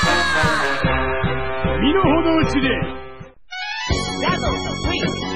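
Adaptive stream at a lower bitrate, from 0.81 s to the end: the quality drops suddenly with no gap, as the player switches to a much leaner encoding, which fits a step down from about 128 kbit/s MP3 to 16 kbit/s. Nothing remains above 9.9 kHz, and codec artefacts thicken.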